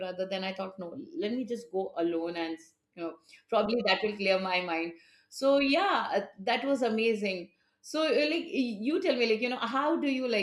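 No technical faults are audible.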